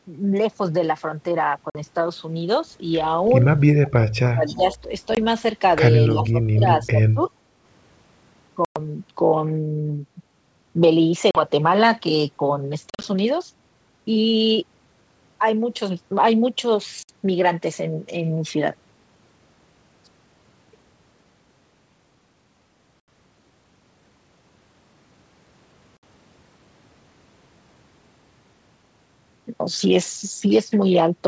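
Hard-edged holes of silence open at 1.70 s, then the speech returns slightly distorted. The same gaps recur at 5.15, 8.65, 11.31, 12.90 (scattered over 140 ms), 17.03, 23.00 and 25.97 s, lasting 20 to 110 ms. This is packet loss on an ADPCM call: missing packets were filled with silence, and the decoder's predictor and step size drifted from the sender's until they re-converged.

A faint delayed copy trails the speech at 3.26 s, about 35 dB down, and is likely an echo leak from a loudspeaker whose canceller let part of the signal return 326 ms late. It comes back louder, about 20 dB down, at 4.46 to 4.77 s and 6.11 to 6.27 s, and faintly again at 7.25 s.

Around those echoes, from 4.21 to 4.88 s, 6.13 to 6.66 s and 6.90 to 7.21 s, the main speech dips by up to about 25 to 30 dB, likely speech suppressed in double talk as the canceller muted its own talker while both sides spoke.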